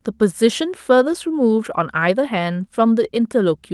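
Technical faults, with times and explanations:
No technical faults are audible; the speech has passed through a normal Opus call path with its top end limited to about 12 kHz.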